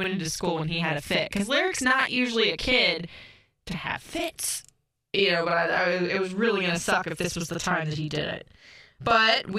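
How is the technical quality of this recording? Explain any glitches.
The quality is compromised by one fault lasting the whole recording. Channel delay (doubling): one channel runs 40 ms late before mono summing, giving an equal-level second copy of the speech, not reverb's decaying tail.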